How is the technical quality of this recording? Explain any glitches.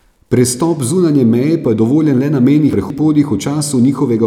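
There's one glitch in this speech recording, a case of chunks out of order. Right after "je dovoljen le na", between about 2.73 and 2.99 s, a block of roughly 85 ms plays two blocks later than it should, so that short stretch comes out in the wrong order. Nothing goes missing, but it creates three hard joins, and the sound there comes across as a brief scrambled stumble.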